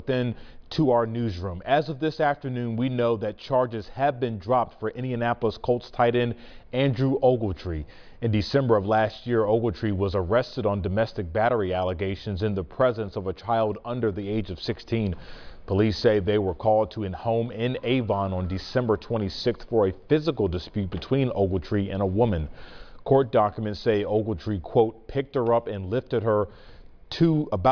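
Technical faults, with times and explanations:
No technical faults found anywhere in the audio.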